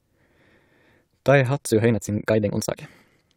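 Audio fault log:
1.63–3.36 s, time-stretched section: software likely squeezed this stretch to fit a shorter length, running it 1.72 times faster and keeping pitch by dropping short pieces. The pace jumps abruptly at 1.63 s, and the speech turns rushed without rising in pitch.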